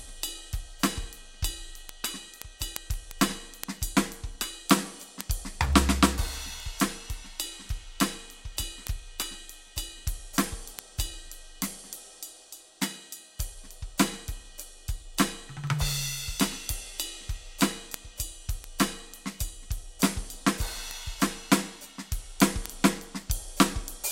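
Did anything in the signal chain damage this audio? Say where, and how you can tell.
Yes, at the digital interface between two devices. The music carries word clock ticks from 0.15 s to 24.05 s. They arrive roughly every fifth of a second, around 150 in all. They are sharp, and their strength varies. The receiving device runs on its own clock, not locked to the sender's. The two clocks differ by something like 150 ppm. Each time they slip past each other, one sample is dropped or repeated, producing a tick.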